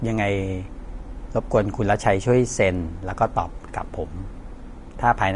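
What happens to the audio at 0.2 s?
At 0.2 s the speech carries Vorbis compression, which runs through the whole clip and likely comes from a low-quality encode, fitting roughly 36 kbps. Coarsely quantised treble becomes grainy hiss, attacks blur, and nothing remains above 10.6 kHz.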